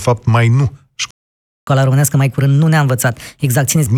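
At 1.11 s, right after "mai nu", a playback stall silences the speech for 0.57 s, likely a starved buffer; the waveform shows a flat gap, the spectrogram a blank column. From 1.67 s to 3.87 s the player catches up at higher speed, 1.25 times normal, raising pitch about four semitones; spectrogram harmonics shift upward and the waveform compresses horizontally.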